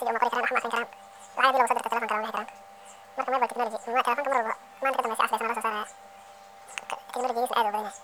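From start to finish, the speech plays at twice its proper speed. It is raised by 12 semitones, a full octave. This is audio read two samples at a time, giving double speed. The playback side took each pair of samples as a single frame. It treated mono data as stereo, or as samples twice as wide. Half the frames then pass in the expected time.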